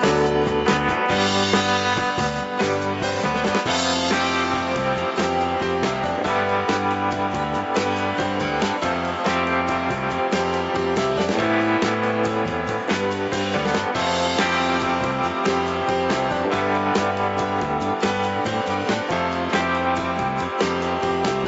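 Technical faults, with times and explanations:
Nothing stood out on listening.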